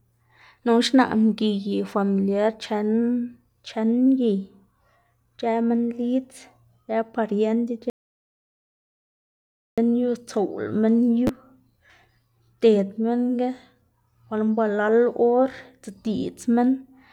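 An audio dropout to silence runs from 7.9 to 9.78 s: the speech cuts off into silence for about 1.9 s, likely from a lost input signal.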